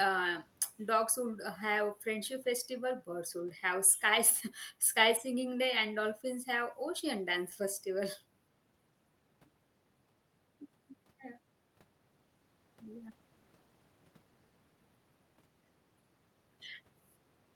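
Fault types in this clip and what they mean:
No fault types are present in this clip.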